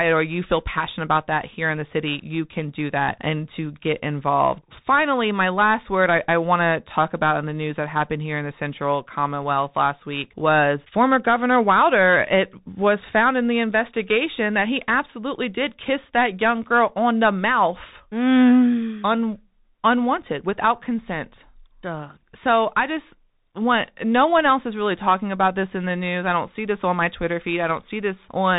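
From start to finish, the speech carries the sound of a Bluetooth CVSD headset codec. The damage is plainly audible. Nothing above 4 kHz survives, so the voice is narrow and boxy. CVSD sends one bit per sample, saying only up or down, with a step size that adapts. Fast, loud high sounds outrun that step and distort. S sounds turn scratchy. A granular hiss sits under the speech. It fits a 64 kbps link.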